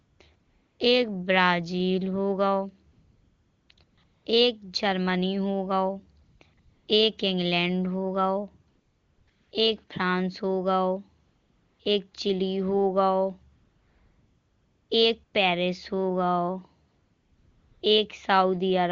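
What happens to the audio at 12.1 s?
At 12.11 to 12.13 s there is a brief burst of AMR comfort noise lasting about 20 ms. The handset's voice activity detection treated that instant as a pause and sent no speech frame, so the receiving end filled the gap with synthetic noise built from a coarse estimate of background level and spectral shape. The real background drops out and a smooth, steady hiss briefly stands in, briefly switching the texture of the audio.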